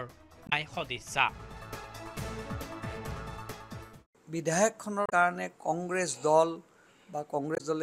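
Corrupted bytes in the compressed stream make the decoder misread frames, lose sync and hunt for the next frame header. This damaged data is heard as brief blips at 0.46–0.53 s, 5.06–5.12 s and 7.54–7.61 s.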